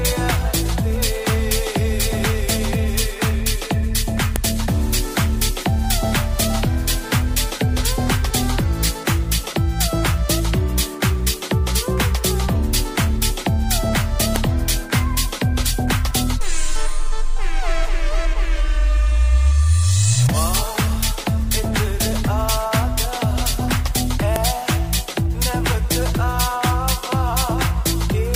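WAV headers were left in when 10-second pieces were joined, so header bytes play as a file header played as audio: sharp snaps at 4.36, 14.36 and 24.36 s.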